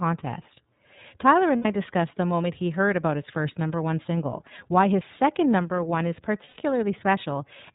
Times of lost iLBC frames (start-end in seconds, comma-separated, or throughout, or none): 1.56-1.66, 6.44-6.57